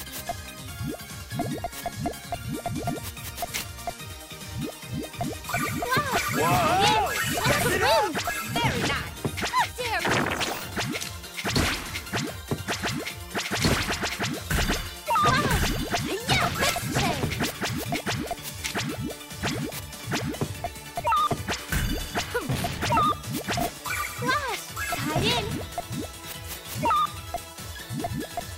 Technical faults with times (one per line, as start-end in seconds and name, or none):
none